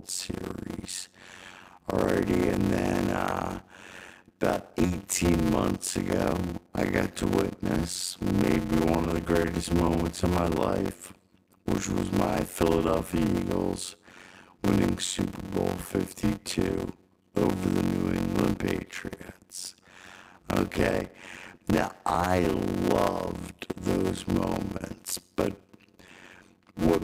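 A steady buzz near 92 Hz runs through the whole speech clip, and everything plays at about 0.53 times normal speed while the timbre stays. This is a block size mismatch (padded), which fits 256-sample blocks being read as larger ones, with each block's remainder filled with silence.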